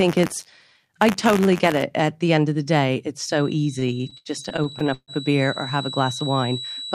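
From 0 to 1.83 s the speech carries buffer tearing, a steady robotic buzz at about 93.8 Hz, which fits a 512-sample buffer. Writer and hardware reader have slipped, so a small slice of each buffer replays audio roughly 30 ms old between hard joins.

At 3.2 s a feedback whistle enters and runs to the end: a thin 3.9 kHz tone about 15 dB below the speech, swelling and fading slowly in level. The likely cause is a loudspeaker-to-microphone loop sitting right at the edge of feedback.

From 3.79 to 5.11 s, under the whistle, repeated stalls (stutter) occur. Packets arrived late, draining the jitter buffer thirteen times. The receiver stretched the last sound to fill 382 ms, up to 138 ms at once and 29% of the span, so nothing is lost but delivery drags.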